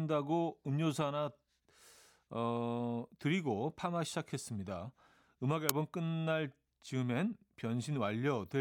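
At 5.69 s an uninitialised buffer plays: about 2.9 ms of leftover memory read as samples, heard as a sharp, loud crack, which fits a 128-sample buffer.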